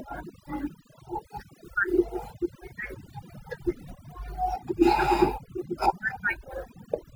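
A noise reduction stage set far too aggressively runs through the whole of this speech recording, an overdone noise removal that cuts individual frequency bands down or out wherever they sit close to its noise estimate. The gaps between phrases fall to near silence scattered with twinkling specks, and the quieter parts of the voice are stripped away with the noise.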